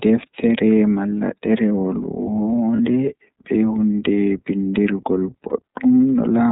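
A speech recording carried through the iLBC codec throughout. Its damage is plainly audible: the voice sounds slightly rough and synthetic, and a spectrogram shows a hard ceiling at 4 kHz with nothing above it. That roughness fits the 13.33 kbps mode with 30 ms frames. Lost iLBC frames interrupt it twice, at 2.76 to 2.79 s and at 5.49 to 5.58 s. Each time, the decoder fills the missing frame by repeating the last pitch cycle mixed with noise, so the gap sounds like a brief held, buzzy vowel. The waveform shows a short stretch of regular repeated cycles, and the spectrogram shows flat, smeared harmonics at those spots. Because each iLBC frame is coded on its own, the voice is right again almost at once afterward.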